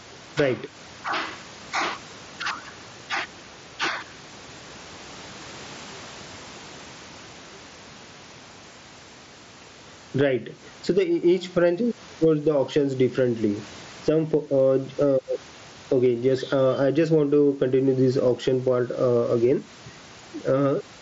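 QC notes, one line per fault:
Throughout, gain pumping. The swing is large, around 15 dB. Loud and quiet passages sit close together, so the sound feels squashed. This is likely a microphone gain set far too high, with a fast limiter or compressor pulling it down on each peak. The room noise sits about 36 dB below the speech.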